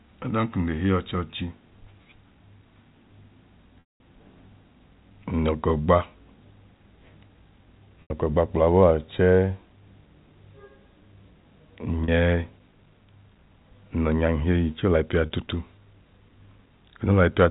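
Packet loss with pitch repetition occurs four times: 3.8–4.0 s, 8.02–8.10 s just before "gba kpla", 12.05–12.08 s, and 15.26–15.30 s just after "chẹẹ olayipẹa". The receiver loops the last pitch period to fill each gap. The 40 ms losses sound like a briefly held, buzzy tone. The 80 ms and 200 ms ones fade out over about 50 ms, and the 200 ms gap drops to silence before the speech cross-fades back.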